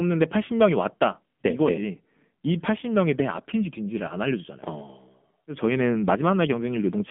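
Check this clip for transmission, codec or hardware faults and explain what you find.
One fault runs through the whole clip, an AMR narrowband mobile codec. The speech sounds buzzy, thin and synthetic, with nothing above 3.5 kHz. This fits a low AMR-NB mode near 7.4 kbps, rebuilding the voice from a vocal-tract model and a few pulses per frame.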